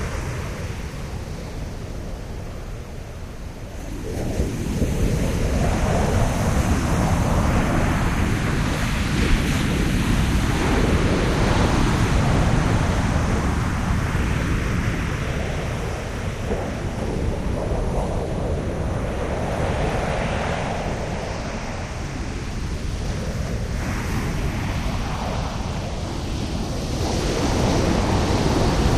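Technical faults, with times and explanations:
Listening to these sounds, nothing stood out as a technical fault at any point.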